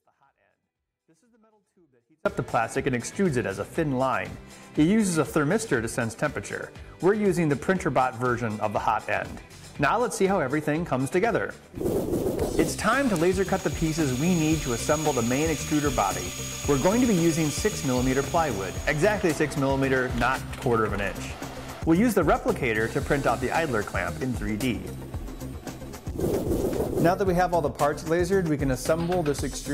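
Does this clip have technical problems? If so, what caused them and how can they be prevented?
Yes. The clip opens in an audio dropout to a faint residue that is already under way at 0 s and lasts until about 2.26 s. For that stretch the wanted sound is missing, and only a faint leak of it remains, roughly 40 dB below its normal level, before the full signal returns abruptly. The likely cause is a momentary break in the signal path, such as an intermittent connection or a muted stage, while the downstream chain stayed live and passed only leakage. Securing connectors and confirming that every stage is unmuted and passing full level before recording starts would prevent it.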